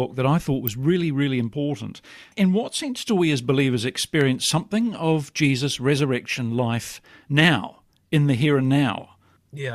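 At 0.67 s, between "that I thought" and "really really important", and again at 4.21 s, after "do we as believers", a sharp snap cuts through the speech: an electrical switching spike, likely from a nearby switch arcing. Each shows as a thin full-height vertical line on a spectrogram and a spike near -10 dBFS on the waveform.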